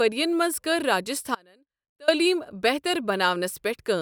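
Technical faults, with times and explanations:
1.35 to 2.08 s, audio dropout to a faint residue: speech abruptly drops to a faint leak about 30 dB down for 0.73 s, likely signal loss while the path stayed live.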